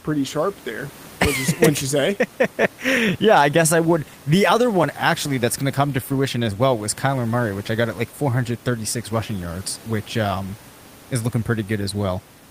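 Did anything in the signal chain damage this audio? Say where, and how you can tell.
No, nothing in the signal chain damaged this speech.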